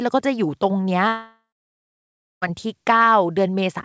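From 1.08 to 2.44 s the speech breaks off, likely a long network dropout. The last sound smears into a fading buzz, then about a second of near-silence follows before speech resumes with the lost stretch gone. On a spectrogram this shows as a blurred tail decaying into an empty gap, with all energy stopping at 8 kHz, which fits a G.722 call codec.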